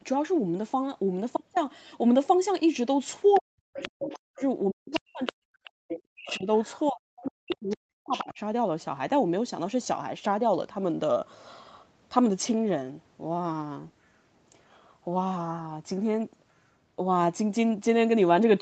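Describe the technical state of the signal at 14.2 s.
At 14.2 s the speech is intact, with no dropout, glitch or distortion.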